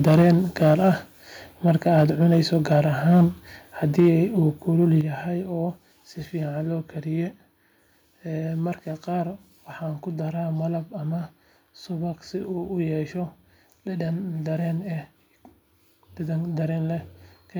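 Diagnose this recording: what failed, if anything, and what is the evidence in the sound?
Microphone overload at 0.06–0.34, 0.62–0.89, 1.66–2.8, 3.09–3.25 and 3.98–4.16 s, the last just before "uu kulul yahay oo". Peaks exceed full scale by about 3 to 7 dB and their tops are flattened, giving a harsh crackle. This is likely an input level set too high at the converter.

Microphone volume stepped down at 0.22, 4.0 and 5.01 s, the last between "uu kulul" and "yahay oo si". The speech and background level drops suddenly by about 3, 3 and 7 dB. The first two steps fall inside clipped peaks, which likely points to call processing cutting the input gain.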